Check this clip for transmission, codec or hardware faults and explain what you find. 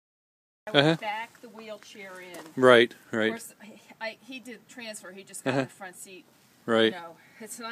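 One fault is present, a cut-off start. From 0.00 to 0.67 s the audio is digital silence, then sound begins mid-event at 0.67 s with no natural attack, because capture started late. The waveform shows a flat line jumping straight to the signal, and the spectrogram is blank before a sudden full-energy column.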